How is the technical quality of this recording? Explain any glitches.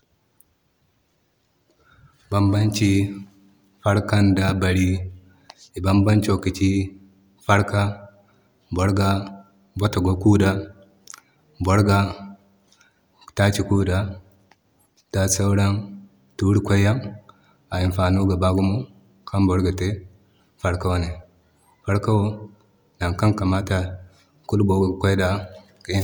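No glitches or technical faults can be heard anywhere.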